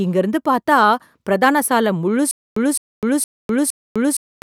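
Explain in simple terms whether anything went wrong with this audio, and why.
The playback or stream most likely stalled from 2.31 s to the end, and each time it tried to recover it replayed the last scrap of audio and then ran out. This is a stutter with silent gaps. The same burst of speech, about 211 ms long, comes back four times on a steady beat of roughly 464 ms, with about 253 ms of dead silence in between. The speech that belonged in that stretch is simply missing.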